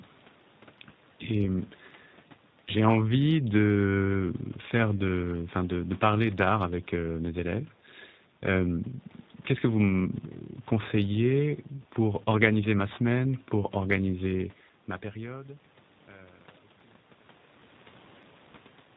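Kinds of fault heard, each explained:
G.729 codec: Throughout, the speech sounds plainly rough, buzzy and slightly synthetic, with nothing above 4 kHz. That fits an 8 kbit/s voice codec that rebuilds each 10 ms frame from a vocal tract model, a pitch predictor and a few pulses.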